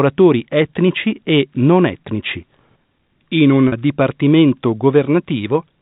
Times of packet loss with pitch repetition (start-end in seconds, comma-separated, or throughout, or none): 3.68-3.72